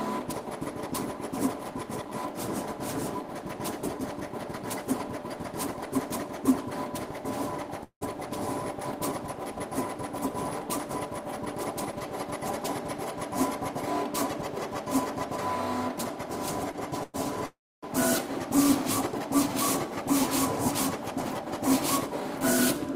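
At 7.83 to 8.03 s there is a call audio freeze, most likely from packets held up in transit so the jitter buffer ran dry. The receiver extends the last sound for about 178 ms as a fading buzz, and the final 90 ms or so drops to silence. Playback then resumes exactly where it stopped, so a pause has been inserted but nothing is lost, and everything afterwards sits later.

From 16.71 to 16.75 s comes a short stall from a late packet. One packet missed its playout time, the buffer emptied, and the receiver stretched the preceding sound by about 19 ms until the packet arrived. None of the audio goes missing. What you hear is a brief hold on the sound with a slight buzzy smear before it continues.

Two more call audio freezes follow closely, again likely caused by delayed packets starving the buffer. At 17.03 to 17.16 s the last sound is carried on for about 105 ms as a buzz that never reaches silence. 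At 17.46 to 17.84 s the fill lasts about 367 ms, with roughly 280 ms of it gone silent. Each time the audio picks up from the same point, adding delay rather than removing anything.

From 20.91 to 22.87 s a jitter buffer speed-up is at work. The buffer was holding more audio than its target, so the receiver trimmed it back by cutting many tiny pitch-period-sized slices in succession, around 70 ms in total. Playback runs at about 103% speed with the pitch unchanged, so this stretch runs slightly faster.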